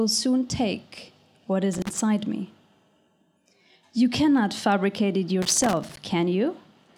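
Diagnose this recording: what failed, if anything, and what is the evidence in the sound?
Loose connector crackle appears from 1.73 to 2.02 s and again from 5.42 to 5.97 s, the second burst nearly twice as long. The failure sits in the analogue wiring. A worn or dirty contact in a plug or jack is intermittently opening and closing as it shifts, so the signal is chopped into fragments. Any DC offset on the line turns each break into a pop, which gives these irregular scratchy bursts over the sound.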